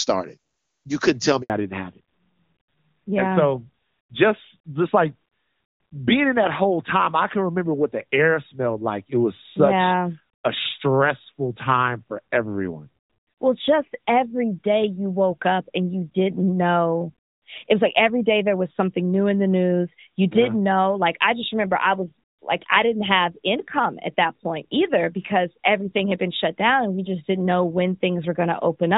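At 1.42 s there's a handover gap: the call jumps networks and no speech frames make it through for about 80 ms, until 1.50 s. The sound just cuts out, goes silent, and whatever was said in that slice is gone.

Right after, from 1.50 s to the end, you get a fallback to narrowband. The clean HD Voice of the opening second and a half drops to what sounds like the older AMR narrowband codec, so nothing above 4 kHz survives and everything turns duller and rougher.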